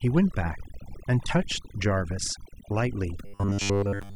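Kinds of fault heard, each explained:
Overdone noise removal: Noise reduction was pushed too hard across the whole clip. Frequency bands near the estimated noise floor get pulled right down, taking quiet parts of the voice with them. The background drops and breaks up into twinkling specks.
Robotic sound from repeated short buffers: From 3.26 s to the end, the voice becomes a rigid, metallic buzz pitched at 100 Hz. This is likely caused by late audio being covered by repeating short chunks of about 10 ms. Most of this stretch is repeats rather than fresh sound.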